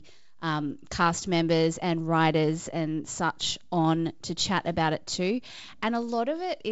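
No technical faults can be heard in the speech, which shows only the light upper-band hiss and the lack of content above 7.7 kHz that come with G.722 wideband telephone coding, at a rate that fits 56 kbit/s.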